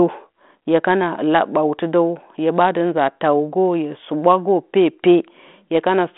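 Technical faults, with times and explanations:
No technical faults are audible anywhere in this recording.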